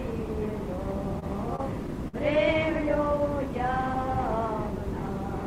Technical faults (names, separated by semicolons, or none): repeated stalls (stutter)